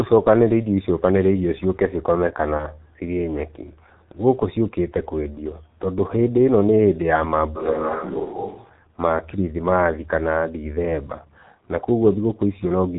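From start to finish the speech sounds muffled and hoarse, with nothing above 4 kHz and consonants smeared together. The voice quality shifts in sluggish steps rather than following the speaker closely. This is the G.723.1 codec, a low-rate telephony coder that packs speech into 30 ms frames and refreshes its model of the voice only slowly. The heavy damage here fits a bitrate of roughly 6 kbit/s.

Between 2.57 and 2.66 s the speech briefly turns into a stretched, smeared sound that dies away. The voice stays weak and distorted for a short while after normal sound returns. This is VoIP packet loss concealed by the speech codec. The decoder had no data, so it kept repeating its last pitch and filter at a falling level. The gap points to a single lost 30 ms frame, and the codec takes time to recover because each frame builds on the one before.

From 7.58 to 8.68 s, ending just before "ma kirithimathi kana ndithemba", the voice abruptly becomes roomy and hollow, with thinner bass and a faint background of room noise well below the speech. 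Its loudness barely changes. The sound then snaps back just as suddenly. This is most likely a switch to a distant microphone: for about a second the recording drew on a pickup further from the speaker instead of the close one.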